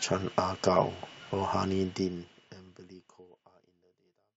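No technical faults can be heard in this speech recording. The level eases down in a smooth fade-out from around 2 seconds to the end, with no click or hard edge.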